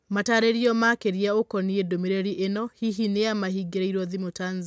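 Nothing is technically wrong with this speech recording, which carries the normal band limit of call microphone processing, with no content above 8 kHz.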